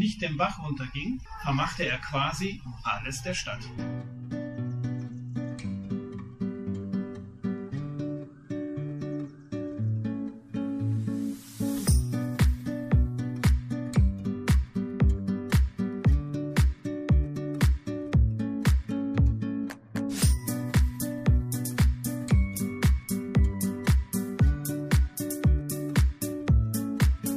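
Nothing here stands out as a technical fault; the audio just runs along the whole way without anything going wrong that you can hear.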